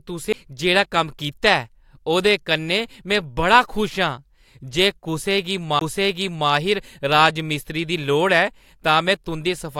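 CD skips at 0.33 s and from 5.79 to 5.81 s: the laser jumped tracks, so the speech ticks and leaps, with brief muted gaps in the waveform.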